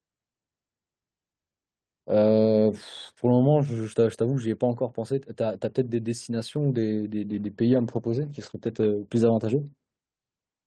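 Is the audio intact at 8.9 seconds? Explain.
No. At 8.9 s the clip sits inside a call bitrate drop lasting from 7.31 to 10.05 s. The encoder's budget fell, which suggests a drop from 32 to 12 kbps, so the speech is coded coarsely and cut off above 8 kHz. It sounds rough and muffled, and is worst for about 1.2 s.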